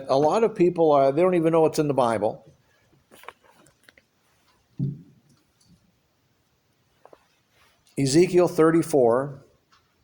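No faults are audible anywhere in the clip.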